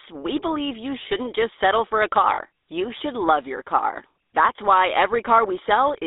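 Right through the clip you can hear the GSM full-rate codec: a buzzy, gravelly roughness from pulse-excited vocal-tract modelling, with the band squeezed to about 250 Hz to 3.7 kHz, consistent with 13 kbps.

At 2.34 to 2.39 s, between "just settle for a" and "you should love your", there are lost GSM frames: about 40 ms filled by repeating the last good frame, giving a brief metallic ring.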